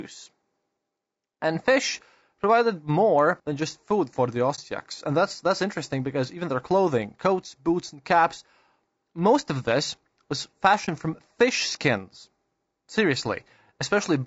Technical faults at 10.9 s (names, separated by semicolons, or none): low-delay AAC compression; AAC frame loss with muting